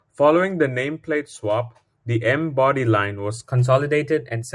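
Speech that plays back at the wrong sample rate from 3.44 s to the end at 4.55 s: the voice jumps about 1.5 semitones higher and runs 1.09 times faster, which fits 22 kHz audio being played at 24 kHz without conversion. On a spectrogram, harmonics and formant bands shift about 9% upward and syllables shorten; on the waveform, pitch periods visibly tighten from that point.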